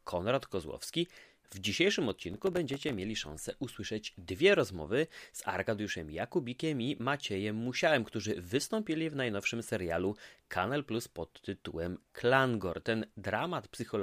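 It's a speech recording, and from 2.09 to 2.98 s, just before "szansę usłyszeć dwie rozmowy", there's a burst of processor overload crackle: dozens of missed deadlines, each dropping a tiny silent gap, which fits buffers of around a millisecond and a half, leaving a gritty tearing over the voice.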